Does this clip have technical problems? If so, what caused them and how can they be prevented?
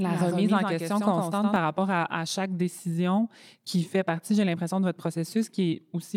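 Yes, there's a doubled audio track from the start to 1.56 s: a second copy of the speech runs around a tenth of a second behind, roughly 5 dB quieter, then cuts off abruptly. It's likely a slower second capture path mixed in. Mute or route out that duplicate path.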